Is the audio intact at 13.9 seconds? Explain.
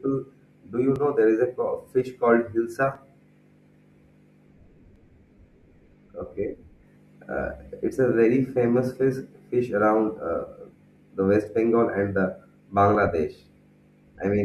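Yes, the audio at 13.9 seconds is intact, with no audible fault at that moment.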